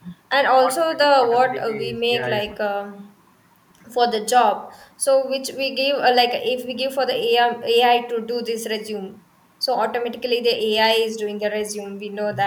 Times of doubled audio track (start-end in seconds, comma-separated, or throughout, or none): none